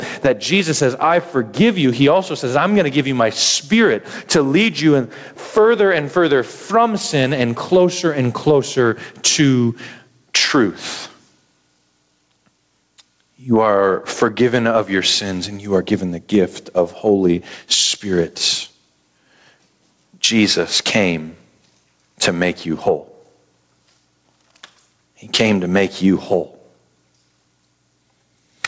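From start to finish, the speech shows gain pumping. The gain ducks hard under each loud syllable, a swing of about 20 dB. Loud and quiet passages sit squashed together. The likely cause is input gain set far too high, with a fast limiter clamping down. Nothing reaches above 8 kHz, which fits a G.722 call at 64 kbps.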